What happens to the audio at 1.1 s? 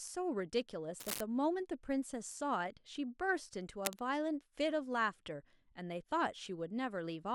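At 1.1 s the speech is overlaid by cable scratch noise, running from about 1.00 to 1.21 s: a dense, uneven scratching burst only slightly quieter than the speech. The likely cause is a worn cable or connector being moved, its contact resistance fluctuating rapidly.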